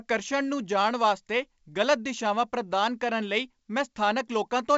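No technical faults can be heard; the speech comes through G.722 wideband telephone coding at 64 kbit/s working as intended, with its coding damage at most faint.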